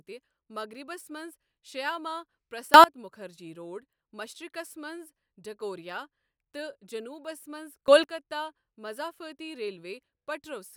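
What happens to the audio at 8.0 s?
A sudden gain jump hits between 7.88 and 8.04 s, likely from a gain setting applied in a single sample step with no ramp. The speech and the background noise leap up together by about 15 dB, so the whole sound abruptly becomes much louder for that moment.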